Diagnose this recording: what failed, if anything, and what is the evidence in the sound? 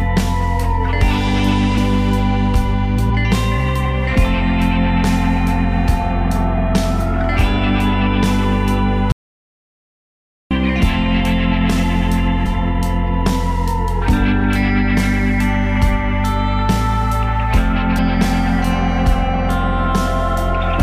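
Short smeared blips, not hard clicks, mark forward jumps in the sound at 1.77, 3.09, 6.99, 12.45 and 17.97 s. These are compressed frames skipped at the codec or storage stage. Whole 23.2 ms frames were lost or rejected, roughly 100 to 200 ms each time, and the overlap between frames softens each join.

From 9.12 to 10.51 s the sound cuts out into silence for about 1.39 s, with no room tone underneath. This is an audio dropout to silence at the capture stage, likely a lost input while the recorder kept writing silence.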